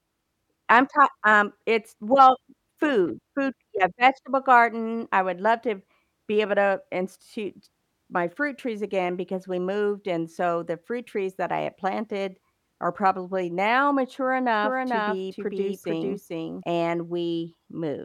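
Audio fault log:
14.63 to 16.63 s, doubled audio track. Right after "are probably now mature", a second full-band copy of the speech cuts in abruptly. It trails by roughly 0.4 s and sits about 5 dB lower, with no decay or room colour. A slower capture path likely mixed it back in.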